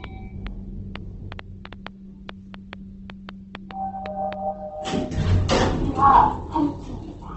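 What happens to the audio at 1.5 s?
At 1.5 s the sound sits inside a train of clicks running from 0.04 to 4.34 s: about 3.7 similar pops per second at an uneven pace, roughly fifteen in all, standing well above the sound. The likely source is interference or a faulty connection or power supply. Their repeated shape and sustained run set them apart from random crackle or a single dropout.

Over the same moment, Opus compression is heard: nothing above 8.2 kHz, and a grainy, rough texture rather than MP3-style swirling, since this codec fills starved bands with noise instead of leaving holes. This likely comes from the music (CELT) mode at a low rate, which fits about 16 kbps.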